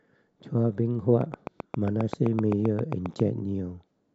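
From about 1.21 s to 3.21 s there's a train of clicks running over the speech: roughly fifteen near-identical pops at a steady 7.6 per second, poking out something like 10 dB above the talking. Because they keep the same shape and even spacing regardless of what's being said, they sound like a mechanical tick laid on top, carrying straight through the gaps. That's most likely interference from nearby gear or a faulty connection or power supply.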